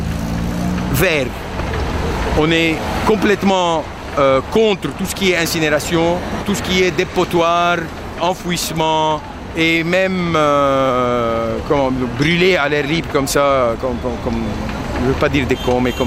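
Nothing in the recording stood out as a technical problem on listening.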